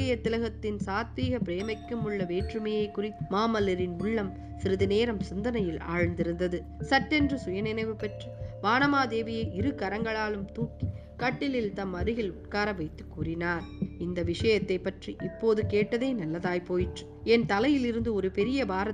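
Nothing is technically wrong with this audio, as no faults can be heard anywhere in it.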